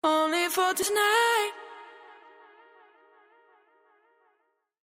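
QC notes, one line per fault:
0.78–0.90 s, frames out of order: a short stretch, about 0.11 s, comes out with its two halves swapped, which fits two neighbouring runs of four frames each getting decoded in the wrong sequence. You hear a brief garbled flutter rather than a dropout. Nothing goes missing, so the timing afterwards stays put.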